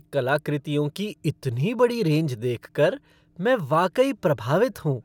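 No audible technical faults.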